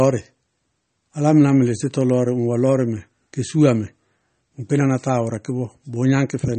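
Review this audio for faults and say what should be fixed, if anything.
MP3 compression damage runs through the whole speech recording and is plainly audible. Nothing is present above 8.4 kHz, so the treble is cut flat at a fixed point. Weak frequency lines drop in and out between frames, which gives a watery, swirly texture and chirpy s sounds. The damage points to a low bitrate of around 32 kbps, and the likely cause is an MP3 encode. To prevent it, keep the master lossless or encode MP3 at a much higher bitrate.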